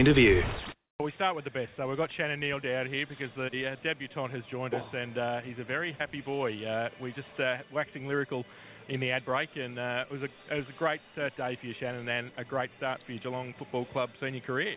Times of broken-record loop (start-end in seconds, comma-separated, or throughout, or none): none